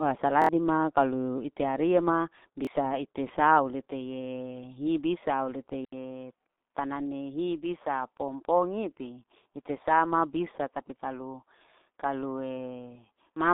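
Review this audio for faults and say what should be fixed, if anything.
The whole clip of speech carries G.723.1 codec damage at 6.3 kbit/s: nothing above 3.8 kHz survives, giving a muffled, hoarse sound with smeared consonants. Carry the call on a wideband codec at a higher bitrate.

A repeated buffer stutters at 0.42–0.49 s, just before "kalu ite ariaa ma": one piece plays three extra times, hard-joined. The piece length fits a 1024-sample buffer of about 23 ms. A second repeat, with one extra play, comes at 2.65–2.67 s, between "kalu ite ariaa ma" and "ite sau lete". Enlarge the playback buffer, or raise the thread priority, so new audio arrives in time.

At 5.85 s, right after "hi bisa au lete", an 80 ms silence marks an input switched to a poorer device, likely a different microphone or a headset call profile. From there to the end, the sound turns duller and boxier, with nothing above 3.8 kHz. 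There is a new noise floor about 55 dB below the signal, and no level change. Lock the input device for the whole session so the system cannot change it.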